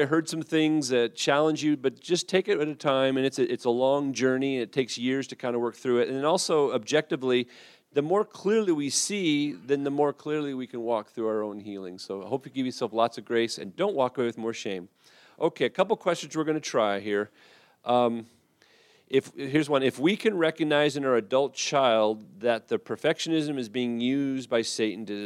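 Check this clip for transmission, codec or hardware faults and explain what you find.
Nothing in the signal points to a transmission, codec or hardware problem; the audio runs continuously with no breaks, distortion or spurious noise to report.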